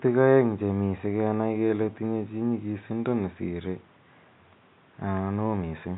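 No technical faults are audible.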